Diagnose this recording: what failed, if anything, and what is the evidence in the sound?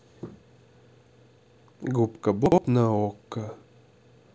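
Chunks out of order at the buffer stage, 2.46 to 2.58 s. A 60 ms chunk plays one chunk late, jumbling the speech briefly across three hard joins.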